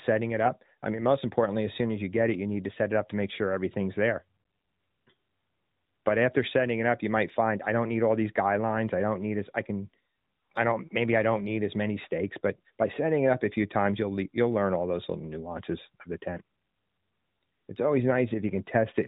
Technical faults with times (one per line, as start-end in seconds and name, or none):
none